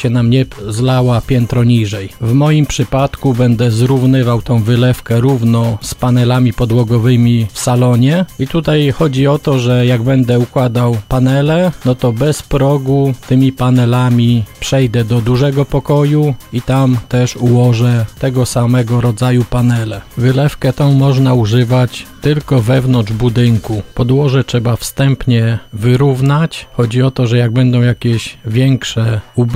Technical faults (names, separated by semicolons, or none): switching supply whistle